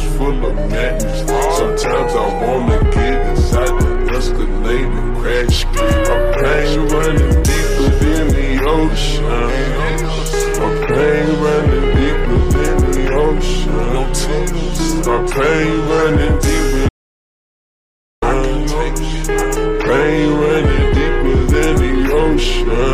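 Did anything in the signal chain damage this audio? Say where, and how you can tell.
Yes. An audio dropout to silence runs from 16.89 to 18.22 s, cutting the sound off mid-flow for about 1.33 s. It is plain silence with no room tone, unlike a noise gate's residual floor, so the likely cause is input loss upstream while the recorder kept writing.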